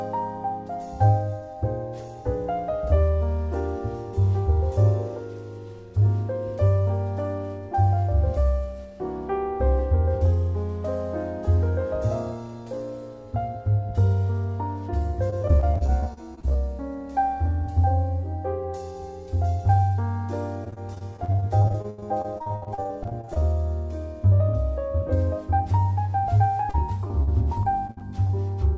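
Repeated packet loss (robotic sound) occurs three times: 15.30 to 16.56 s, 20.64 to 23.44 s, and 26.70 to 28.31 s. Packets kept going missing. Each hole was patched by stretching the last bit of sound. The result is choppy, with pieces missing. The middle stretch is worst, with about a quarter of it patched and gaps up to 79 ms. The call path's band limit at 8 kHz, which fits G.722, dulls the top end throughout.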